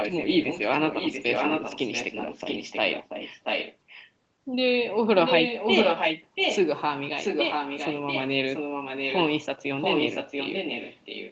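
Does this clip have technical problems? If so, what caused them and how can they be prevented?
Yes. An echo leak at 0.00–4.11, 5.25–6.59, 7.22–8.23, 8.53–9.25 and 9.79–11.32 s repeats the speech 685 ms late. It is slightly quieter than the speech, and about as loud at 5.25–6.59 s. This is likely a far-end loudspeaker's pickup that its echo canceller failed to remove. A spectrogram shows harmonic patterns duplicated 685 ms to the right, and the waveform shows doubled, overlapping envelopes. Headphones or a properly tuned echo canceller on that side would prevent it.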